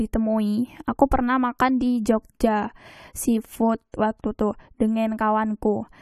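A transform codec spread its quantisation noise across a whole block, so noise meant for a sharp attack leaked into the quiet just before it. The result is pre-echo from 3.92 to 3.94 s, between "makan di jogja seafood" and "waktu tu": a brief hiss of about 21 ms, with the onset sounding softened and smeared.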